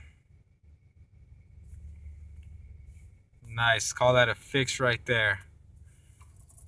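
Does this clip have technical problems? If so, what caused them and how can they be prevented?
No, there are no technical problems to report here.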